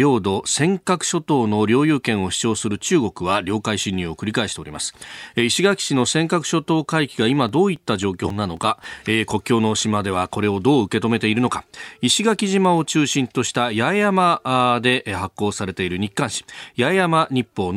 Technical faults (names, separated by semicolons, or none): CD scratch ticks